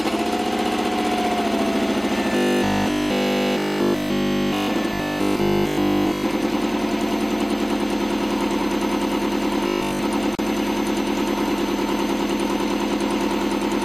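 Robotic sound from repeated short buffers runs from 2.36 to 4.68 s, from 4.94 to 6.24 s, and from 9.67 to 9.99 s. A rigid, metallic 50 Hz buzz replaces the sound while still roughly tracking its shape. This likely comes from new audio arriving too seldom, so nearly everything heard there is the last 20 ms of audio looped over and over while the real material is skipped.

A gap at a join of encoded pieces opens at 10.35 s and lasts 37 ms. It is a brief silence in continuous sound, its edges smeared by the codec, after which the sound resumes where it stopped. Separately encoded segments were joined without trimming each encoder's leading delay and final-frame padding.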